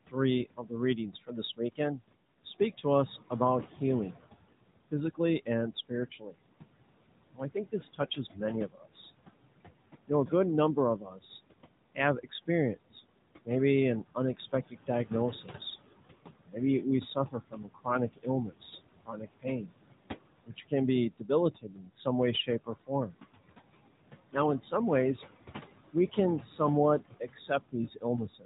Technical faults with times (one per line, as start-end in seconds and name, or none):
0.00-28.45 noise suppressor artifacts
0.07-3.31 speech cut by the noise suppressor
4.89-6.35 speech cut by the noise suppressor
7.33-8.94 speech cut by the noise suppressor
10.07-23.15 speech cut by the noise suppressor
25.93-28.45 speech cut by the noise suppressor